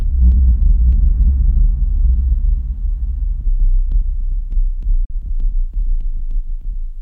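At 5.05 s the audio mutes abruptly in a digital broadcast dropout, fading out within 3 ms. One lost frame, about 43 ms of sound, is gone before playback resumes near 5.15 s.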